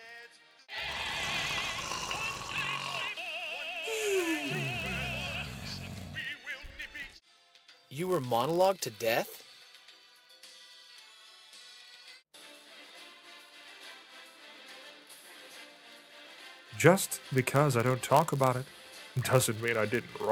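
A block size mismatch (padded) runs throughout: zero-filled gaps in every block produce a steady 99.6 Hz buzz, and the audio plays at 0.996 times normal speed.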